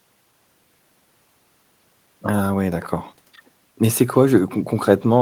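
Listening to this speech recording, nothing stood out as a technical problem at any point.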